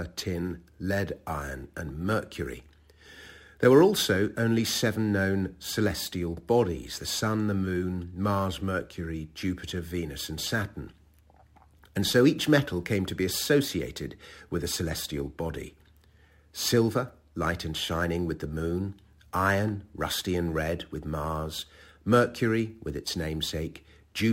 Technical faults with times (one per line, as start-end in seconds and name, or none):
0.00-24.32 crude rate conversion